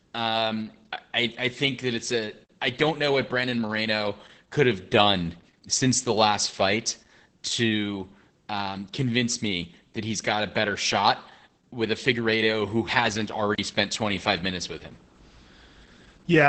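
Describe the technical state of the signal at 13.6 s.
Right at 13.55 s, just after "who hasn't", the signal drops into a block of digital silence lasting about 35 ms, returning at 13.58 s. A chunk of samples has been replaced by silence, most likely from an output buffer not being filled in time. Unlike a codec dropout, which would be smoothed over by concealment, there is no fade and no filler, so the sound cuts out and back abruptly around a short, dead hole.

Underneath this, the whole passage carries heavy Opus voice compression in its SILK speech mode, with the sound confined to about 8 kHz and coarsely coded, consistent with a bitrate near 10 kbps. The voice comes out muffled, hoarse and slightly robotic. That damage is continuous, which separates it from the sudden, isolated gap at 13.55 s.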